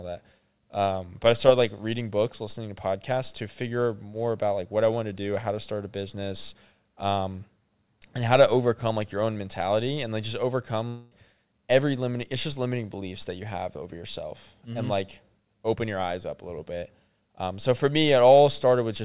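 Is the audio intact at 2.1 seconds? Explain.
Yes, the speech at 2.1 seconds is intact, with nothing missing or disturbed beyond the narrow telephone-style band that runs throughout, with nothing above 4 kHz, as expected from a G.711-type call codec.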